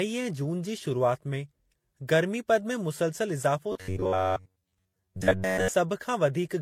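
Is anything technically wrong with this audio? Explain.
Yes, two faults are present.

Throughout the clip there is transcoding between lossy codecs. The speech was likely encoded more than once, with each lossy stage treating the previous stage's errors as real signal and then adding artefacts of its own. The result is layered smearing and swirly distortion of differing character. Nothing remains above 18.5 kHz, the lowest cut-off in the chain. The mix of artefacts fits Vorbis, then HE-AAC, then a final MP3 encode near 96 kbit/s.

From 3.72 to 5.68 s there is robotic sound from repeated short buffers. Fresh audio likely arrived too slowly, so playback filled the gaps by looping the most recent fragment, about 10.7 ms long, while most of the real audio in that stretch was lost. That fixed loop length imposes a steady 93.8 Hz buzz, so the speech becomes a rigid metallic buzz that only loosely tracks its original contour.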